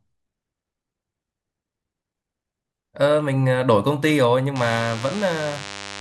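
From 4.55 s to the end, DECT cordless phone buzz: a nearby handset's radio bursts every 10 ms are rectified, giving a thin 100 Hz buzz, quietly under the speech, with evenly stacked harmonic lines on a spectrogram.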